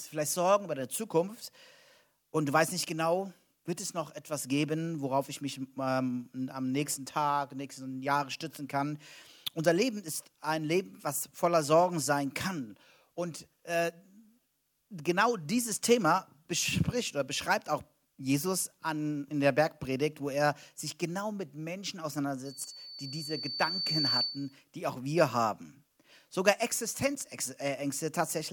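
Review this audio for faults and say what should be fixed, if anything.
There's a loudspeaker feedback squeal from 22.45 s to 24.57 s. A single tone at 4.5 kHz creeps in and swells over about a second and a half until it sits roughly 5 dB above the rest of the sound. The mic is hearing the speaker it feeds, and at 4.5 kHz the loop has more gain than it loses, so that frequency keeps feeding itself until the loop is broken. To prevent it, pull the mic back from the speaker or turn the gain down, and notch out the 4.5 kHz band so the loop stays below unity.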